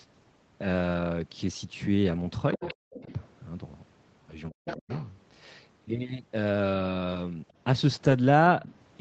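At 2.07–2.09 s a lost packet was rebuilt from error correction: the decoder played a low-bitrate copy carried in the next packet, so there is no gap, but that 20 ms sounds rougher and noisier.

From 2.53 to 2.74 s the other side's voice is leaking through, likely because the echo canceller left some loudspeaker pickup in the microphone signal. A second voice sits about 10 dB below the talker. Over nearly the same span, 2.54–2.74 s, speech is suppressed in double talk, likely because the canceller could not separate the talker from that echo and turned both down. The talker dips by up to about 30 dB across roughly a tenth of a second.

At 2.91–3.13 s the leak returns more faintly, about 20 dB below the talker. Within it, at 3.04–3.10 s, a milder double-talk suppression dips the talker by about 5 dB.

At 4.51–4.89 s the double-talk suppression is at its strongest. The talker drops by as much as about 40 dB over roughly 300 ms. 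Overlapping it, from 4.66 to 5.06 s, the other side leaks through at about 10 dB below the talker.

At 7.11–7.17 s a second rebuild fills 40 ms, which points to two lost packets. The decoder played the error-correction copies, so the sound roughens but does not break.

At 7.48–7.53 s there is a brief trace of leaked far-end voice, about 40 dB down.

At 8.03–8.13 s a 60 ms rebuild, consistent with three lost packets, gives the longest coarse, noisy patch.

At 8.61–8.75 s the far-end voice leaks through once more, about 20 dB below the talker. All of this sits within the call path's roughly 8 kHz audio bandwidth.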